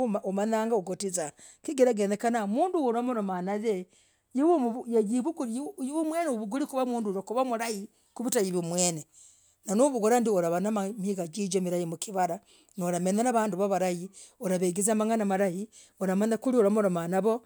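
A speech recording, muffled at the start. From 0.0 to 5.06 s it suffers from de-emphasis applied wrongly. A treble cut was added where no pre-emphasis existed, or was applied twice. The top slopes smoothly away, about 8 dB down at 10 kHz relative to 1 kHz.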